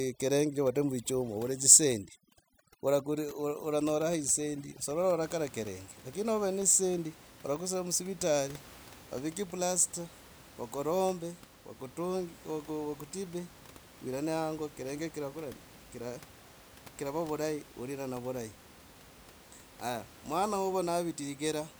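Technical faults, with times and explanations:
0.00 to 5.23 s, overdone noise removal: the background drops to near silence dotted with twinkling specks. A noise reducer set too hard is cutting whole frequency bands that sit close to the room noise, about 22 dB below the speech, and is taking the quieter parts of the speech with them.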